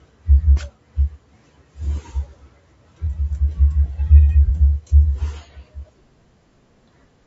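Speech runs through the whole clip with a rough, grainy texture: noise fills the gaps between the voice's harmonics and the top band sounds synthetic. That points to low-delay AAC compression, likely AAC-ELD at a bitrate around 32 kbps, whose short frames resolve pitch harmonics poorly. From 4.46 to 4.50 s a brief smeared, noisy patch interrupts the sound. This is AAC frame loss with concealment, consistent with a single lost frame that the decoder rebuilt from the last good spectrum.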